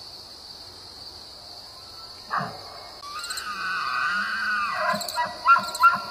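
At 3.01 s the disc player's laser lost its place on the spiral track, most likely jolted by a knock or thrown off by a flaw in the disc surface, and landed on a different turn. This is a CD skip. The player mutes output for roughly 15 ms while it recovers, so the sound drops out with a small tick and then resumes abruptly from another point in the material rather than continuing smoothly.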